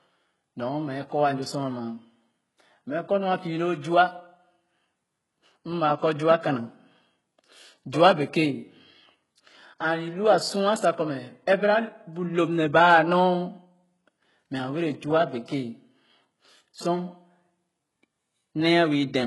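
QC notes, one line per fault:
Throughout, HE-AAC compression: nothing is present above 11.5 kHz, and the treble that remains sounds copied up from lower bands rather than captured, so sibilants come out gritty and lispy. The heavy damage is likely from a very low-bitrate encode, consistent with roughly 12 kbps.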